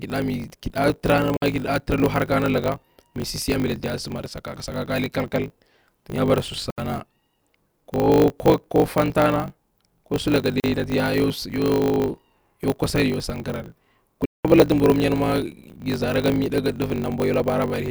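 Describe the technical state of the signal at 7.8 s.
At 7.8 s, as throughout, the speech carries a block size mismatch (truncated): each block's tail, consistent with 1024-sample blocks, is discarded, producing a 50 Hz buzz and playback 1.16 times fast at near-normal pitch.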